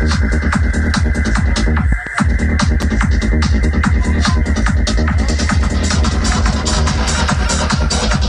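Two loud pops occur between 1.92 and 2.09 s, a close pair, followed by a single one from 2.82 to 2.85 s. Each peaks at roughly 10 dB above the surrounding audio. The cause is likely a voltage step or spike, from a plug, switch, static discharge or driver glitch, added to the signal and then shaped by the downstream circuitry. The pops sit on top of the sound, which continues beneath them.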